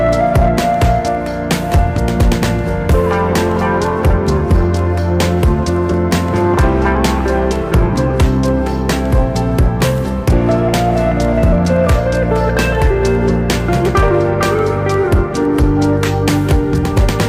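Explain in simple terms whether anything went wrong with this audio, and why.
Hard clipping runs through the whole recording. At some stage the sound came in slightly louder than the equipment could handle, so the very tops of the loudest moments were sliced flat. That adds a brief crackly roughness on peaks, touching only a small share of the sound.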